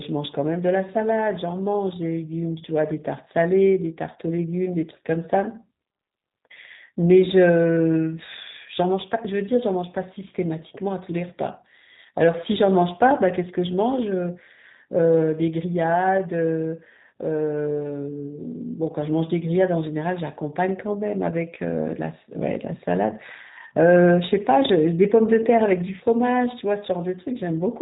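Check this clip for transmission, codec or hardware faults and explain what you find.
One codec fault runs through the whole clip. The G.729 codec is audible from start to finish. The coding fits an 8 kbit/s G.729A stream. It rebuilds speech from a vocal tract filter, pitch prediction and a few pulses per frame. Nothing above 4 kHz survives. The speech sounds dull, slightly rough and synthetic.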